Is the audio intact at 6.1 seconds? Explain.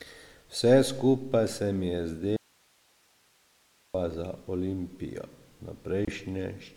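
No. From 6.05 to 6.11 s, a corrupt frame was decoded: flipped bits in about three frames put energy at the wrong frequencies, causing a brief glitchy burst.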